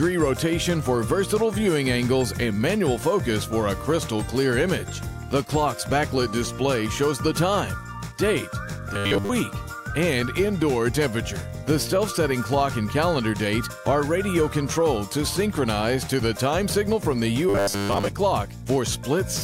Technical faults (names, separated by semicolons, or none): robotic sound from repeated short buffers